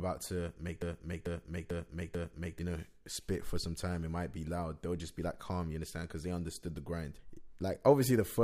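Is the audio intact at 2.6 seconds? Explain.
No. A broken-record loop runs from 0.82 to 2.59 s, ending right at that point. After "to make", a 0.44 s fragment of speech plays four times back to back, exactly identical each pass. This likely comes from the player, encoder or stream stalling and re-sending the last piece it held, so the audio meant for that stretch is lost. Speech resumes abruptly with "know spit for some".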